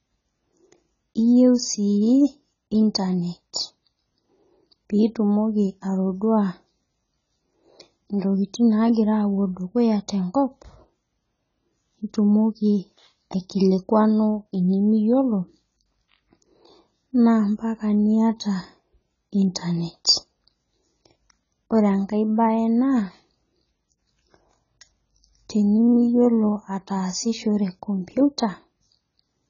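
From start to finish the speech is heavily band-limited and smeared, the likely result of AAC compression at a very low bitrate, which fits something near 16 kbps AAC-LC. To save bits, the encoder drops everything above about 7.1 kHz and coarsely quantises what remains. Sibilants sound dull yet fizzy, and sustained vowels warble. On a spectrogram the energy stops at a hard ceiling near 7.1 kHz, with blotchy gaps and flickering patches below it.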